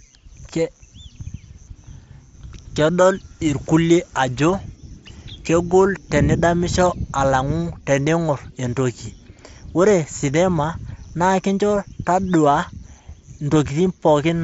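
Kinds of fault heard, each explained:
No faults heard.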